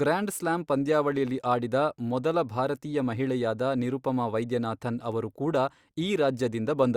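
No technical faults can be heard anywhere in this speech recording. Nothing interrupts, distorts or drops out of the sound at any point.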